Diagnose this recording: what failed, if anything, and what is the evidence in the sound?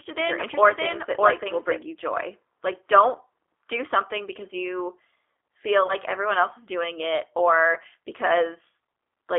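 The codec stage is the main failure: the speech has been through a G.729 codec, and the sound fits the 8 kbit/s G.729A variant. The coder rebuilds the speech from a vocal tract filter, a pitch predictor and a few pulses per frame. The result is plainly rough and synthetic across the whole clip, and the line band stops at about 300 Hz and 3.5 kHz.

A doubled audio track is present from the very start until 1.82 s. A second full-band copy at about the same level trails the original by roughly 0.7 s, with no decay or room colour, and it cuts off abruptly at 1.82 s. The likely cause is the same signal being captured again through a slower path, or an edit that left two copies out of step.

At the network stage, VoIP packet loss concealed by the speech codec shows up from 5.87 to 5.91 s. About 20 ms of audio went missing, which fits a single dropped packet. The decoder filled the gap by extending its last pitch and filter state with falling gain, so a brief, fading synthetic stretch replaces the real sound. 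Because each frame builds on the previous one, the voice stays weak or distorted past the gap itself.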